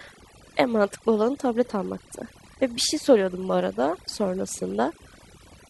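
A short speech recording suffers from overdone noise removal from start to finish. The noise reduction was set far too aggressively. It pulls individual frequency bands down hard whenever they sit close to its estimate of the noise floor. Quiet parts of the voice fall below that threshold and vanish with the noise. Between phrases the background drops and breaks up into twinkling specks.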